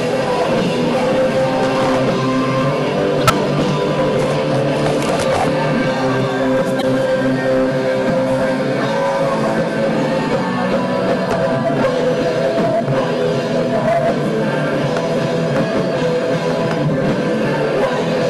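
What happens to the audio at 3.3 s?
At 3.3 s the audio has just come through a corrupt frame decoded, running from 3.21 to 3.30 s. Flipped bits in several consecutive compressed frames were decoded anyway, so misread gains and codes placed energy at the wrong frequencies for about 90 ms. The result is a chirp, squeak, blip or burst of noise peaking near -5 dBFS. A spectrogram shows a short block of misplaced bright bands, and the waveform shows a sudden jagged spike there.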